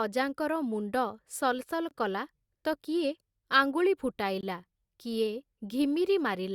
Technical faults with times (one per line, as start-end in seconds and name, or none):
1.89-1.91 gap between chunks
4.41-4.43 gap between chunks